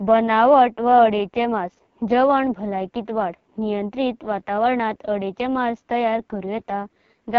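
AMR wideband (HD Voice) codec damage runs through the whole of this speech clip, and it is heavy: the voice comes across rough and raspy, which fits the lowest 6.6 kbit/s mode. At that rate the encoder's pulse-driven model of the vocal tract has too few bits to follow the speech closely, so detail smears into a gritty texture. Nothing is present above 6.8 kHz.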